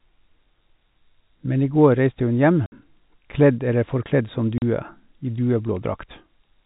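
Just after "hun hjem", at 2.66 s, packet loss filled with silence cuts a 60 ms hole, which fits three 20 ms packets dropped; a second 40 ms gap follows at 4.58 s. Both holes start and stop abruptly in the narrowband telephone-coded sound.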